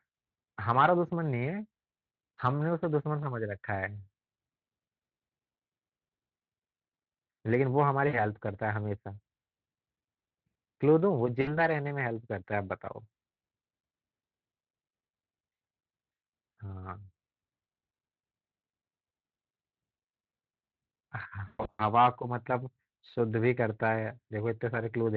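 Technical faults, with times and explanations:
8.07 to 8.20 s and 11.41 to 11.59 s, VoIP packet loss concealed by the speech codec: about 60 ms of audio is lost each time, and the decoder extrapolates from its last pitch and filter into a buzzy tone or coloured noise that fades. On a spectrogram, flat harmonic smears fade out; the waveform shows a repeating periodic stretch.
21.47 to 21.84 s, VoIP packet loss concealed by the speech codec: about 260 ms is lost in bursts spread over 320 ms, the longest 120 ms. Repeated extrapolation gives a buzzy or noisy, fading decay. The spectrogram shows broken, blurred harmonics, and the waveform shows gain dips and uneven envelope gaps.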